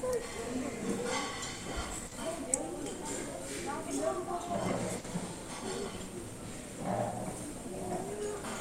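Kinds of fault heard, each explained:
Short concealed packet loss: About 40 ms of audio arrived too late to decode, so the receiver extended the preceding sound across the hole near 2.07 to 2.12 s. It is heard as a brief smear. On a spectrogram it shows as a blurred, over-smooth patch, and the waveform has no sharp edges.
Burst of packet loss: Several consecutive packets went missing, leaving a 60 ms gap around 4.98 to 5.05 s that the receiver filled by continuing the last sound while fading it down. The waveform envelope decays there, and the spectrogram shows stretched, dimming partials before the sound resumes further on.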